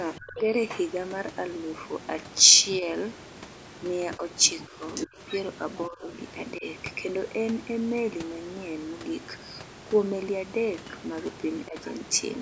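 A speech recording from a call, and the far end's voice is leaking through at 0.15–0.39 s, 2.73–2.78 s, 4.45–6.17 s and 11.55–12.29 s. It's loudest around 4.5–6.2 s, only a few dB under the talker, and barely there near the end. That's likely loudspeaker echo the canceller didn't fully remove. The talker also gets ducked at 0.2–0.47 s, 4.17–5.19 s, 5.89–6.65 s and 11.68–11.75 s. The first dip is a deep one, around 25 dB, and the later ones are milder. It's likely the speech being suppressed in double talk, with the canceller pulling the talker down alongside the overlapping echo.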